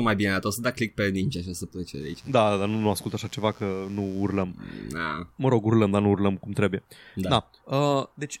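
Right after "și o să plece", at about 2.00 s, a mains buzz comes in under the speech and hangs on until about 4.43 s. It's that steady, raspy rasp you get when something like a dimmer, a rectifier or an unshielded cable lets sharp switching spikes leak in twice per cycle of 60 Hz mains, so the harmonics stack up into the kilohertz range. It sits roughly 30 dB below the speech.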